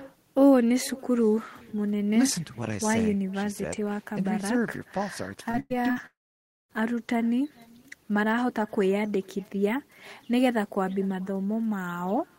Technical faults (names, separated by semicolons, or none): echo with no canceller; short concealed packet loss; burst of packet loss; long network dropout